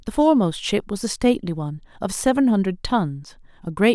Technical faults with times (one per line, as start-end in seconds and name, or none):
none